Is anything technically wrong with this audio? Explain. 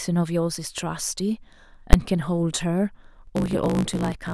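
Yes, there are two faults in this speech recording.

At 1.93 s there are invalid numbers at full scale. A calculation produced infinite or invalid values, which became the largest positive or negative value for one 10 ms block. Because the block is so short, the result is a single sharp bang.

From 3.2 s to the end there is a block size mismatch (truncated). An upstream stage writes longer blocks than the next stage reads, so the tail of every block is discarded. This causes a 54.4 Hz buzz, and the speech runs about 1.09 times too fast while keeping its timbre.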